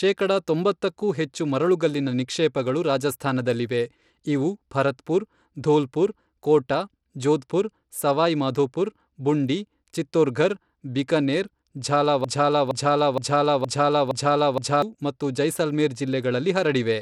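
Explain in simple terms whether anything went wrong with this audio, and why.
Two things went wrong. Throughout, the speech sounds gritty and the treble flickers. Bluetooth SBC compression is the likely cause, starving the high frequencies of detail. From 12.24 to 14.82 s, a broken-record loop plays: one half-second piece (about 0.47 s) repeats six times, back to back, before "ಮತ್ತು ಜೈಸಲ್ಮೇರ್". The likely cause is a stalled stream. The speech that belonged there is lost.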